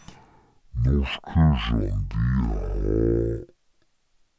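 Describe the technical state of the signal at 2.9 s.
At 2.9 s, as throughout the clip, a wrong sample rate is in effect: the samples are read out at half the rate they were captured at, with no conversion, which fits 32 kHz material played at 16 kHz. The speech runs at half speed and sits a full octave low, sounding slow and deep.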